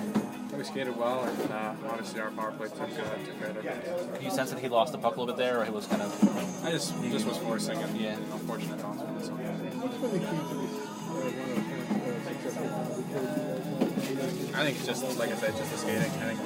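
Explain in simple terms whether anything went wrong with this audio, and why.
Nothing went wrong here: the recording comes through steady and intact, with no technical problems to point to at any moment.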